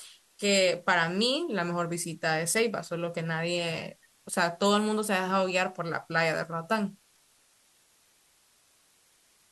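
A steady, even hiss sits under the speech from start to finish, with no crunch or distortion on the voice itself. This is low bit depth with dither: the audio was reduced to about 9 bits, and dither turned the rounding error into constant white noise, roughly 35 dB below the signal.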